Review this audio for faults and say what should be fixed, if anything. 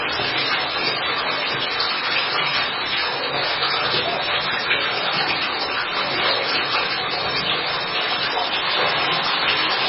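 MP3 compression is likely across the whole clip: nothing sounds above 5.5 kHz, and weak spectral detail flickers in and out with a watery swirl. That pattern points to a very low bitrate around 16 kbps. The encoder runs short of bits, so it cuts the treble and drops quieter frequency lines frame by frame. To prevent this, keep the original uncompressed or losslessly compressed file, or re-encode from it at a much higher bitrate.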